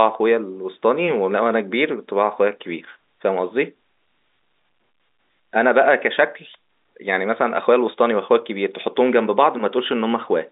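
No technical faults are audible.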